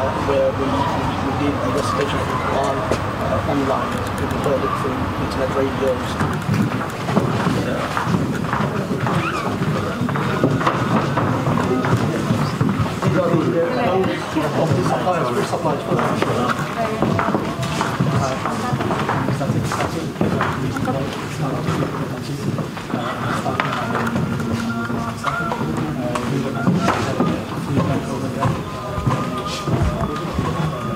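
No technical faults can be heard anywhere in the audio.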